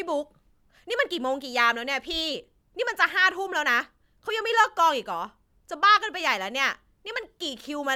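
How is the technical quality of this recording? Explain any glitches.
The recording's technical quality is sound, with no glitches to explain.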